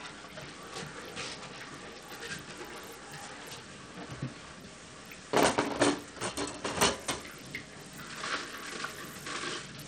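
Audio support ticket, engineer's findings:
Whole clip, 0 to end: treble thin and flickering, gritty granular noise riding the sound, aliasing. Likely Bluetooth SBC compression on the link, with a small bit pool leaving the upper sub-bands starved and the rest coarsely quantised. Damage fits a low rate, around 80 kbps. Spectrogram: top bands blinking on and off in blocks, ragged upper edge, noise smeared across bands. Waveform: no obvious change.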